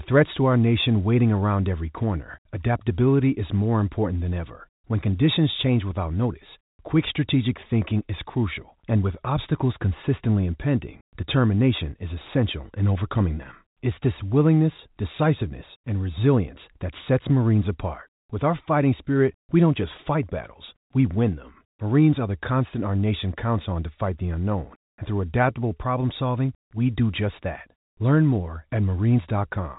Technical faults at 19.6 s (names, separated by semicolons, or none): none